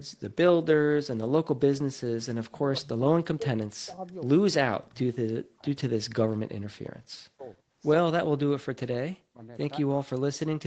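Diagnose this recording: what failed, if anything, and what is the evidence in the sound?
The speech keeps dropping out in pieces at 2.23–4.07, 4.88–4.99, 5.38–6.02, 7.35–7.7 and 8.09–9.46 s, mostly by about 40 dB, with a shallower dip at 4.88. That's likely speech suppressed in double talk in call processing: the echo canceller mistook this talker for loudspeaker echo and clamped down.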